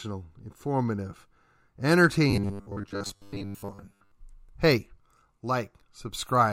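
From 2.31 s to 4.12 s the speech takes on a robotic sound from repeated short buffers: a rigid, metallic buzz at 100 Hz that still loosely tracks the words. The likely cause is audio arriving too slowly, so a 10 ms chunk is looped while most of the real signal is skipped. A spectrogram shows evenly spaced horizontal harmonics every 100 Hz, and the waveform shows identical 10 ms cycles repeating.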